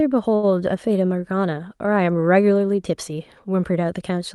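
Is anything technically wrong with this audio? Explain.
Yes, there's a short stall from a late packet in this speech, from about 0.35 to 0.45 s. A packet showed up late, the jitter buffer ran dry, and the receiver stretched the last sound for roughly 76 ms before carrying on where it left off. Nothing gets lost, but that sound hangs on a beat too long with a faint buzzy dip. It all comes through a WebRTC call path, and the top end stops around 12 kHz, which fits Opus at a moderate bitrate.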